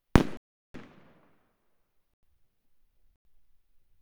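Blocks of digital silence cut in at 0.37 to 0.74 s, 2.14 to 2.23 s and 3.16 to 3.25 s. The sound cuts straight out, leaving holes of about 370 and 93 ms, which fits missed output buffers.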